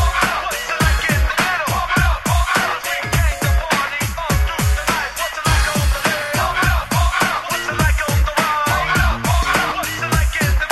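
At 1.30 to 1.33 s a corrupt frame is decoded: flipped bits in a single compressed frame misplace energy in frequency, producing a brief loud glitch peaking near -5 dBFS.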